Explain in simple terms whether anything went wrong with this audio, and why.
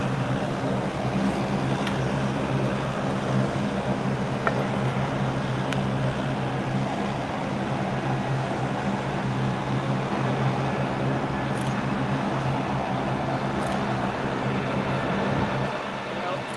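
Nothing went wrong: the audio came through an ordinary call connection, which uses the Opus codec and trims the sound above roughly 12 kHz, and that connection did its job without any dropouts, glitches or other faults.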